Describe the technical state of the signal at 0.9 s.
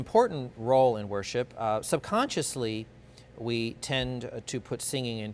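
Nothing is wrong with the signal at 0.9 s; the audio is intact at that moment.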